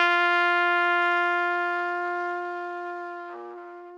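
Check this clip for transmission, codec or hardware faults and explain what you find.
Checking this clip turns up no faults to explain.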